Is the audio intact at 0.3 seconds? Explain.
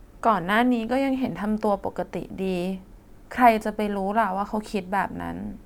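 Yes, the speech at 0.3 seconds is intact, with no fault at that moment.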